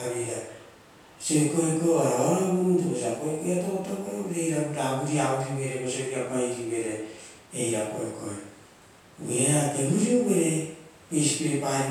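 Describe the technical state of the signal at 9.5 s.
At 9.5 s the speech signal is intact, with no fault present at that moment.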